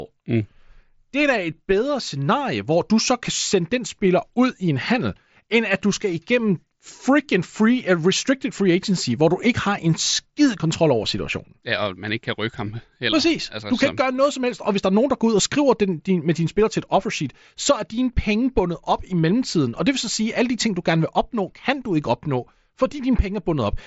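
Nothing in this speech recording registers as a technical fault.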